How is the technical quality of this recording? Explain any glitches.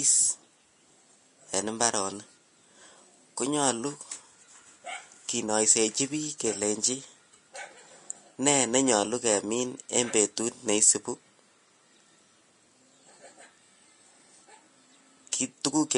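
The technical quality is poor, with audible lossy coding damage throughout and one smeared attack near the end.

Throughout, the speech sounds hissy and grainy, with nothing above 10.6 kHz. This is likely Vorbis compression, where coarse treble quantisation turns detail into noise, consistent with a low bitrate around 34 kbps.

At 15.32 s, pre-echo puts a brief hiss, about 11 ms, just ahead of a sharp onset. The codec spread that block's quantisation noise into the quiet moment before the attack.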